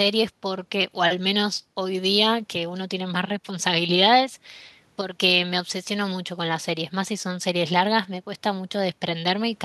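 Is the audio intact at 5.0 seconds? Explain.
No. Right at 5.01 s the speech abruptly drops by about 6 dB and stays low until 5.18 s, a gap of roughly 0.17 s. This is likely one channel dropping out: with one stereo side gone, the mono sum keeps only half the shared signal.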